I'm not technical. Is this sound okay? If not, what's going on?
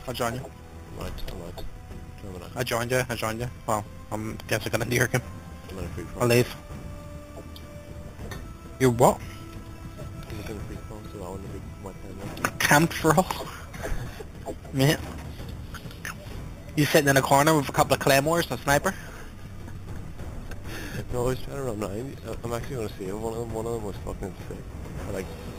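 No. A bright, metallic fizz sits on top of the sound for the whole clip. It rises and falls with the loudness of the sound. This is imaging from sample-and-hold upsampling. The audio was converted to a higher rate by simply repeating each sample, with no smoothing. That creates false mirror copies of the sound, starting between 4 and 8 kHz. The pattern fits audio first recorded at 8 kHz.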